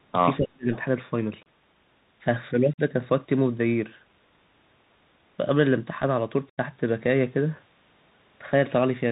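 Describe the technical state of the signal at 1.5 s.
At 1.5 s the signal is just past a dropout: unconcealed Bluetooth headset packet loss removed about 30 ms of audio from 1.43 to 1.46 s, a handful of voice packets that never arrived. Nothing was substituted to smooth the gap, so the speech stops and restarts with hard edges, and on this link it resumes briefly quieter as the codec's adaptive step size recovers from the idle pattern.

Underneath, the whole clip runs through the Bluetooth CVSD headset codec, which is plainly audible here. CVSD encodes each sample as a single up-or-down bit, consistent with a 64 kbps stream, and adapts its step size to follow the waveform. The band is capped at 4 kHz, loud high-frequency content outruns the step and distorts, s sounds come out scratchy, and a granular hiss sits beneath the speech.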